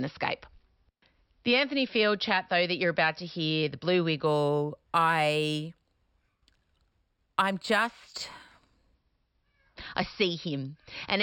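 Imaging from linear upsampling runs from 4.26 to 8.95 s. Straight-line interpolation, which fits speech raised from a 12 kHz rate, leaves the top end dulled and a mirrored image between 6 and 12 kHz, roughly 25 dB down, heard as faint metallic shimmer on sibilants.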